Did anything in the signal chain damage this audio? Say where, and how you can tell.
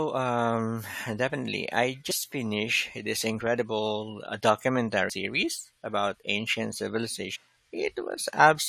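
Yes. The damage is in the compressed stream, at the codec or storage stage. Three short blips in the speech, each under 20 ms, land at about 2.10 s, 5.09 s and 7.35 s. That is the mark of damaged data in a compressed stream: corrupted bytes make the decoder misread or discard a frame, lose sync and hunt for the next valid frame header, producing a brief chirp or squawk.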